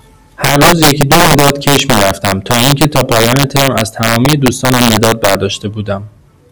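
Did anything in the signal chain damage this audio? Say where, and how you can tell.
Yes. Integer overflow, most likely in a fixed-point gain or sample-format conversion stage. It runs throughout this speech. Gain sits about 5 dB too high, so a few percent of samples exceed full scale. Those peaks wrap to the opposite sign, producing harsh cracks sharper than clipping.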